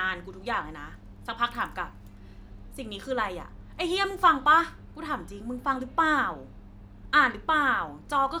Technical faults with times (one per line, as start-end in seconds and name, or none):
none